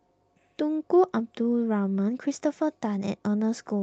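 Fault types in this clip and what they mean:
Nothing stood out on listening to this speech clip as it came through the call path.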